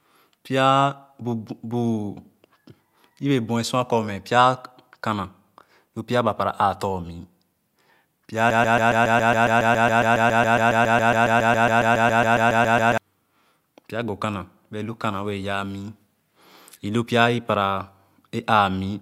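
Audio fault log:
8.50–12.98 s broken-record loop: the speech freezes into a 138 ms fragment that repeats exactly, back to back, 32 times for nearly four and a half seconds, and whatever should have played there is lost. The player or stream likely stalled and kept resending its last held piece.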